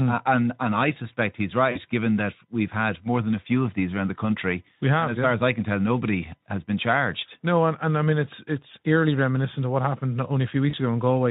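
A speech recording carrying VoIP packet loss concealed by the speech codec in two places, from 1.71 to 1.80 s and from 10.69 to 10.74 s. Each gap of about 40 ms (fitting two consecutive 20 ms frames) is filled by the decoder repeating its last pitch and filter shape at falling gain. This makes a brief buzzy tone or coloured noise that fades instead of a clean dropout. On a spectrogram, the harmonics flatten into evenly spaced horizontal stripes and dim. The waveform shows a short run of near-identical periods shrinking in amplitude. The underlying Speex coding adds only light coding damage.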